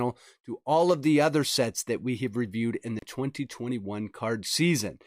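At 2.99 to 3.03 s a digital broadcast dropout briefly silences the sound: the receiver muted after a corrupted or missing frame, and the gap of about 32 ms fits the loss of a single frame. Unlike concealment, nothing is smeared or repeated; the audio simply vanishes and resumes.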